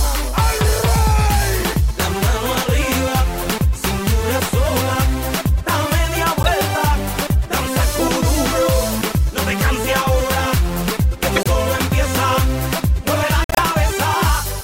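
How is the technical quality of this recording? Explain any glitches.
Quality is marred by three runs of corrupt frames that were decoded anyway, at 6.43–6.49, 11.35–11.47 and 13.44–13.59 s. Damaged data misplaced energy across frequencies, producing loud glitches.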